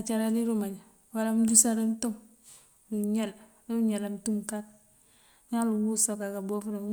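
Nothing in the speech stood out as a technical fault on listening.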